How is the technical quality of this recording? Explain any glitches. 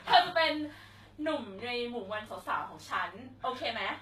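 Technical quality is limited by one fault that runs through all the speech. Low-bitrate audio saved at a high bitrate: throughout, the speech carries the artefacts of the earlier low-bitrate encoding. The likely cause is a roughly 20 kbit/s HE-AAC-style source re-encoded as high-bitrate MP3, which can't restore the lost detail. Nothing sounds above 18.7 kHz.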